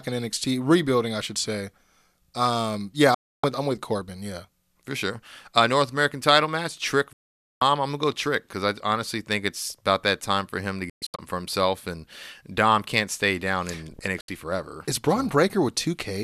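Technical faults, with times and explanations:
3.14–3.44 s, 7.13–7.62 s, 10.90–11.19 s and 14.21–14.29 s: digital broadcast dropout. The receiver lost good frames and muted within about 3 ms, leaving silent gaps of 288, 480 and 72 ms. The third gap breaks into several short holes, the longest 120 ms. Packet-loss concealment would fill such gaps, but here nothing does, and the audio sent during them is gone.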